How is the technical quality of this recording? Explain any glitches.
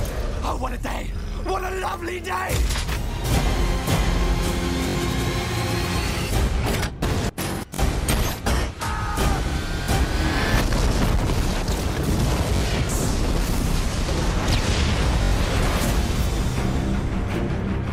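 The audio has five brief stutters, each a repeated buffer. They occur at 4.89–4.95, 7.74–7.79, 9.84–9.88, 12.57–12.61 and 15.23–15.32 s. New audio arrived late, so the last 21.33 ms block played again, which fits a 1024-sample buffer. It repeats two to four extra times, with a hard join at each repeat. Each stutter drops roughly 40 to 100 ms of sound.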